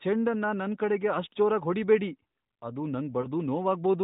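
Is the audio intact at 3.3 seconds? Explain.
No, not quite. Right around there, from about 3.22 to 3.29 s, there's a lost AMR speech frame, just one 20 ms frame's worth. The frame got corrupted in transit and failed its check, so the decoder filled the gap by reusing the last good pitch and vocal tract settings at reduced gain. With only one frame missing, you hear a quick dip or warble rather than a drawn-out fade, all within the muffled narrowband sound of the call.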